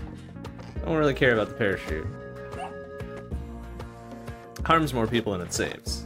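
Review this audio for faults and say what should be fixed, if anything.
Nothing to fix; no faults found in the audio.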